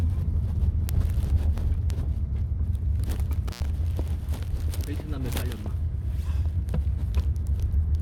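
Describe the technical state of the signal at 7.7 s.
At 7.7 s the audio is intact, with no dropout, clipping, glitch or other fault to be heard.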